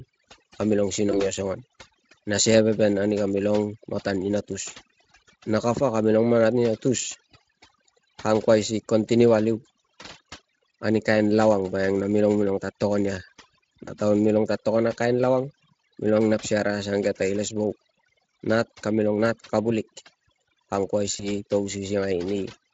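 From the start, overdone noise removal has the background sunk and broken up into twinkly specks, where quieter bits got gated out. At 1.11, 13.85 and 21.17 s there's VoIP packet loss concealed by the speech codec: a gap that fits a single 20 ms frame gets smeared into a short, fading stretch, lasting roughly 80 to 130 ms.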